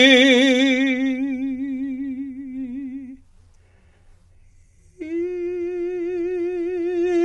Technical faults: low-delay AAC compression

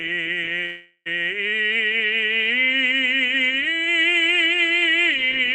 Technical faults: call audio freeze

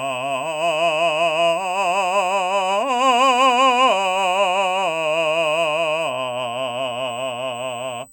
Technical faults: USB whine

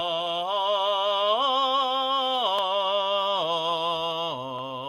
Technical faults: none

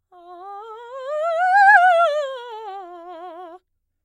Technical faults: none

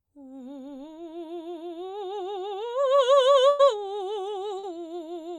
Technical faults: burst of packet loss; short concealed packet loss

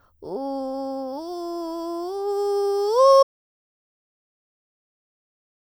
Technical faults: audio dropout to silence

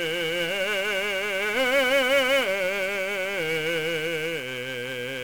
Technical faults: 1-bit DFPWM compression

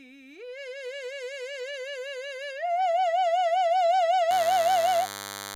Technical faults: DECT cordless phone buzz

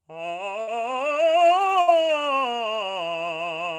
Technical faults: burst of packet loss

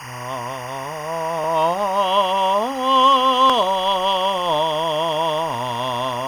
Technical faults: timecode bleed

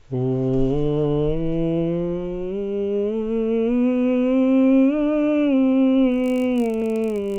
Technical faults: resampler restarted on every block

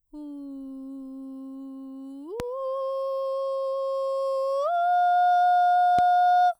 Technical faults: loud pop

